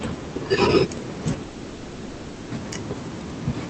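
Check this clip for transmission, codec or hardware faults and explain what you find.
One fault stands out in this speech: a gap where the audio stops and is replaced by fill, from 1.43 to 2.53 s.

Long network dropout (likely cause): For about 1.1 s, nothing arrives and the receiver invents sound in its place. It stretches the last sound into a fading buzzy hiss that fills the whole gap, with no true silence. When speech resumes, the lost stretch is gone for good. On a spectrogram, harmonics smear into a blurred, decaying band. The waveform shows a shrinking envelope before normal activity returns. Throughout, the call codec keeps content below 8 kHz.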